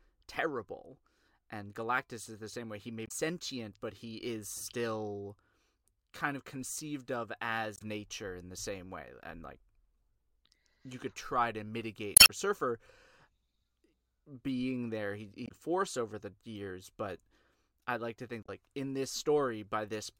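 At 3.05–3.11, 7.75–7.82 (after "kind of conceived of"), 12.14–12.30 (after "you could try to"), 15.45–15.52 (after "being there he") and 18.42–18.49 s, damaged data in the compressed stream makes the decoder lose frame sync, giving short glitches. Each shows as a brief broadband smear and abrupt waveform discontinuity.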